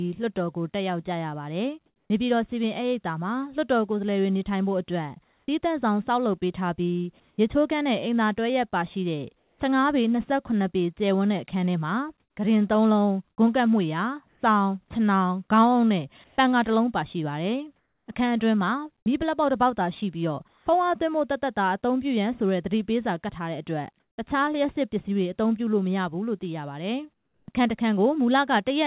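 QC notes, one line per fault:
1.86–2.1 s, 5.24–7.38 s, 9.38–9.6 s, 12.2–18.08 s, 20.48–20.66 s, 27.14–27.48 s: comfort noise in place of the background. Transmission likely paused in silence, so smoother synthetic noise replaces the real background, sometimes dropping about 2 to 17 dB.
27.46–27.48 s: onset clipped by the voice detector. Detection likely lagged the restart, so 20 ms went unsent and the sound begins abruptly, missing its soft attack.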